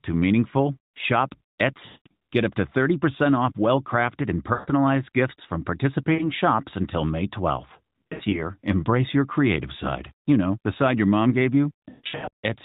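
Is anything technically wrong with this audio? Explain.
Yes, there are lost AMR speech frames at 1.86–2.07 s, 4.54–4.70 s, 6.14–6.29 s, 8.04–8.49 s (scattered) and 11.90–12.46 s (scattered). Each time, the decoder repeats its last good settings with falling gain, so the sound smears, fades, then returns rough.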